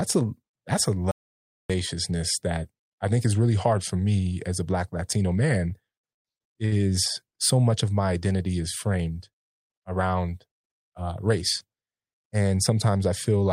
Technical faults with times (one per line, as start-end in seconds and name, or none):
1.11-1.70 audio dropout to silence
6.65-6.74 short stall from a late packet
11.07-11.65 jitter buffer speed-up